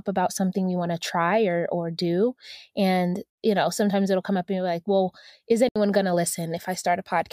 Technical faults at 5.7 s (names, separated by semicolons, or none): Bluetooth dropout